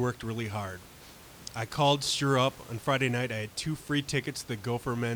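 No faults in the signal chain; the only background is room noise in the recording space, sitting about 23 dB below the speech.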